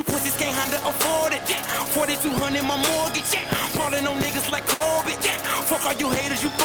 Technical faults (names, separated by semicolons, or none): filter restarted on every block; short stall from a late packet